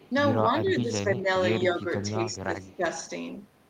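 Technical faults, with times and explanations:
0.00–0.09 s, echo leak: An echo canceller on a loudspeaker-connected end most likely failed to fully cancel what its microphone picked up, so a faint copy went back down the line. It arrives 192 ms behind the original at a very low level, roughly 30 dB under the speech, and lasts only this brief scrap at the opening.
0.60–1.28 s, 1.74–1.89 s and 2.13–2.85 s, speech suppressed in double talk: Each time both ends were active together, the echo canceller likely could not tell its own talker apart from loudspeaker echo and turned everything down. The speech dips in level in patches. The drops reach about 10 dB in the first two spans and about 20 dB in the third, covering roughly half a second, a short burst of about 150 ms, then about half a second again.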